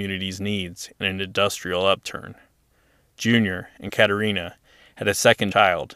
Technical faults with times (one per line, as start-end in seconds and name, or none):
3.88-3.90 compressed frames skipped
5.50 compressed frames skipped